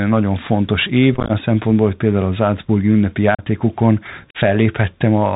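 Speech heard through a Bluetooth CVSD headset codec, and the damage is plainly audible throughout: the band stops dead at 4 kHz, sibilants turn scratchy, loud high sounds distort, and a granular hiss sits underneath, all of which fits a 64 kbps CVSD link. On a spectrogram this shows as a flat ceiling with empty space above 4 kHz. Unconcealed Bluetooth headset packet loss punches holes at 1.14–1.31 s, where about 82 ms of audio is missing in scattered runs up to 15 ms long across roughly twenty packets, and at 3.35–3.45 s and 4.31–4.37 s, each around ten packets and about 40 ms lost. The waveform shows abrupt flat gaps, and the speech comes back briefly quieter after each one.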